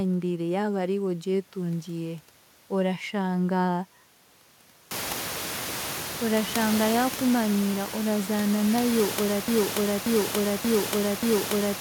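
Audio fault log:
9.48 s to the end: broken-record loop. The player, encoder or stream likely stalled and kept resending the last fragment it held, so a 582 ms slice of speech repeats exactly, back to back, four times until the clip stops. It begins right after "orashanga yaakumanyira orazaana nayo", and whatever speech should have come next is lost. The repeated slice carries the room noise with it, which by then sits only about 10 dB below the speech.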